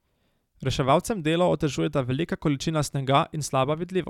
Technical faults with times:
none

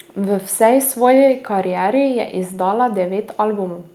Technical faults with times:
none

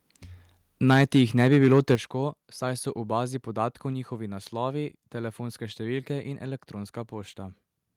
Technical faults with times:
0.88-1.94 microphone overload
0.94 microphone volume stepped down
1.95 microphone volume stepped down

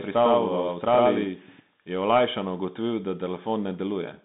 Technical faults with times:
0.00-4.24 Bluetooth CVSD headset codec
0.00-1.60 doubled audio track

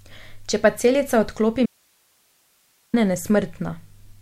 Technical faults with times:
1.66-2.94 audio dropout to a faint residue

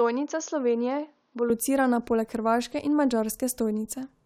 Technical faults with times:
0.00-1.50 input switched to a poorer device

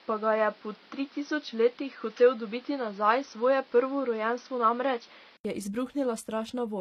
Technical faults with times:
0.00-6.80 HE-AAC compression
0.00-5.45 input switched to a poorer device

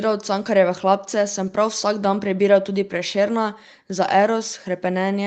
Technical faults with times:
none

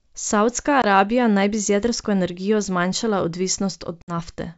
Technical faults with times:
0.82-0.84 packet loss on an ADPCM call
4.02-4.12 packet loss on an ADPCM call

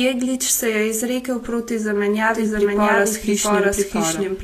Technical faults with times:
0.00-4.43 Vorbis compression
2.29-4.43 doubled audio track

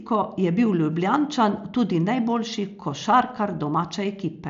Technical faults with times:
none

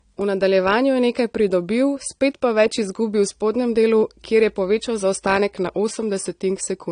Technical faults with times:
0.00-6.92 low-bitrate audio saved at a high bitrate

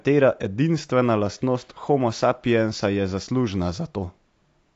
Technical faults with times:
0.00-4.76 AAC compression

